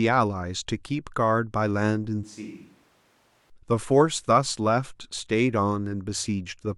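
From 2.24 to 3.50 s the speech turns suddenly roomy, hollow and thin, about 10 dB quieter, with room noise near 20 dB below. This is likely a switch to a distant microphone.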